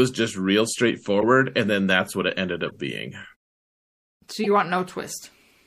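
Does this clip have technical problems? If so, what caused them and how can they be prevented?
Yes. The speech sounds watery and swirly throughout, with smeared onsets. This is likely MP3 compression, with a bit budget that fits about 64 kbps, so the encoder lets weak frequency lines flicker in and out between frames. Encoding at a higher bitrate or with a more efficient codec would prevent it.

Short chirps and bursts of noise break through at 1.21–1.24 s, 2.66–2.72 s and 4.44–4.47 s. Each is a corrupt frame decoded: flipped bits in a few compressed frames misplaced energy across frequencies, and the decoder played them anyway. Error checking that conceals damaged frames instead of decoding them would prevent it.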